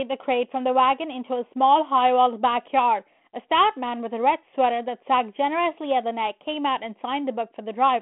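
Nothing goes wrong anywhere in the clip; it's speech carried over a 32 kbit/s G.726 ADPCM line with the usual telephone band of roughly 200 Hz to 3.4 kHz, and nothing above 3.8 kHz comes through.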